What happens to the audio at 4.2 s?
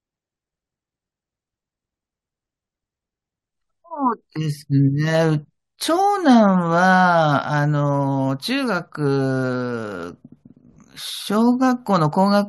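Nothing goes wrong at 4.2 s; the speech runs through that moment without any dropout, click, glitch or other audible fault.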